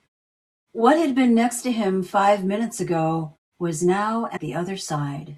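It's a speech clip with one short glitch near the end, from about 4.36 to 4.39 s: roughly 28 ms of garbled sound where the audio seems to skip forward. The likely cause is a broken MP3 bit reservoir. A frame or two went missing, so the next frame looked back for borrowed data and decoded bytes from the wrong frame. The length fits about one 24 ms MP3 frame. The muted pauses sound normal, fading out between phrases.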